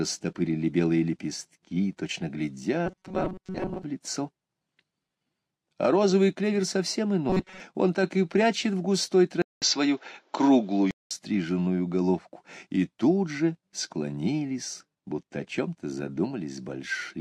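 From 2.86 to 3.83 s, and again from 7.30 to 7.60 s, the sound takes on a rigid, metallic buzz at 188 Hz. This is robotic sound from repeated short buffers, likely caused by a slice of roughly 5 ms being looped while most of the real audio is skipped. On a spectrogram it shows as evenly spaced horizontal lines at multiples of 188 Hz. The waveform shows a short repeating cycle.

At 9.42 s the input switched to a poorer device, likely a different microphone or a headset profile, and it stays that way until 11.11 s. A 200 ms silence opens the switch, seen as a blank vertical gap. After it, the band is narrower, which leaves a flat ceiling on the spectrogram. A faint new noise floor sits about 40 dB down, and the level stays roughly the same.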